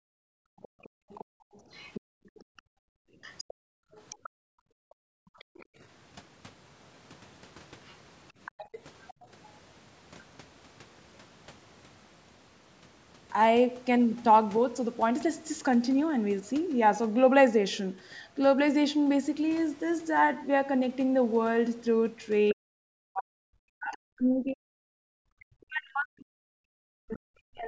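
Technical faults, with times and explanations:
0.0–5.81 s and 8.58–9.27 s, background gated by the echo canceller: the room sound beneath the speech drops away while the far end is playing and returns when the canceller releases. In the first span the gating adds up to about three seconds, with the background falling by about 37 dB at its deepest. The second span is a short dip of about 24 dB lasting a fraction of a second. The canceller is pulling the microphone down hard whenever it detects loudspeaker output.
0.63–5.66 s, 7.86–9.09 s and 22.49–23.97 s, other side's voice leaking through: a second, fainter voice sits under the main talker. It is roughly 20 dB below the speech in the first two spans and roughly 30 dB below it in the third. The likely cause is the far end's audio playing from the talker's loudspeaker and not being fully removed by the echo canceller, so its residue passes on through the microphone path.
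4.41–5.38 s and 22.53 s to the end, speech suppressed in double talk: the main voice dips sharply, by roughly 40 dB at its deepest. The first instance is brief, only about a tenth of a second in total. From 22.53 s onward, dips of this kind add up to about four seconds. This is likely the canceller failing to separate the near talker from the echo and turning both down together. The call's microphone processing, with no content above 8 kHz, is working as intended.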